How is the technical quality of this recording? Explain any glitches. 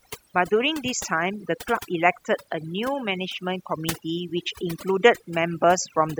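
The recording has one fault that runs through the whole clip: overdone noise removal. Throughout, a noise reducer set far too aggressively has switched off individual frequency bands whenever they came close to its noise estimate, taking softer parts of the speech with them. The background drops and breaks up into twinkling specks. A spectrogram would show a patchy, moth-eaten texture with isolated bright dots scattered through the gaps.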